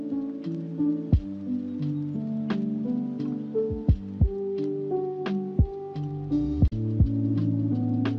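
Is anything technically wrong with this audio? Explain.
No, nothing here sounds technically off to me; it all comes across just as it should.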